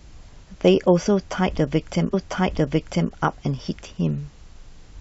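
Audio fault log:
2.13–3.12 s: stream segment repeated. About one second of speech plays a second time, so the clip runs roughly 1.0 s longer than it should. The player fetched or queued the same stretch of the stream twice and played both copies back to back. At the jump back to the segment's start there is a small blip where the two copies meet, and the repeated passage sounds identical to the first.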